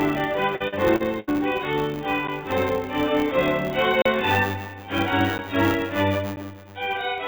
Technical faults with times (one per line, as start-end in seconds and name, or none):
0.00-7.27 filter restarted on every block
0.56-1.38 repeated packet loss (robotic sound)
4.02-4.05 block of digital silence
5.38 block of digital silence
6.36 block of digital silence